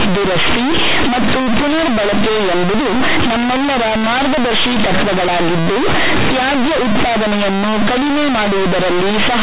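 From start to finish the speech plays as companded audio read as linear: mu-law bytes are treated as plain 8-bit samples without expansion, so every sign change swings the output across roughly half its range. The result is loud, harsh buzzing, with pauses filled by heavy noise. Unlike ordinary clipping, which flattens only the loudest peaks, quiet passages here are blown up to the same level as loud ones. The telephone band still stops at 4 kHz.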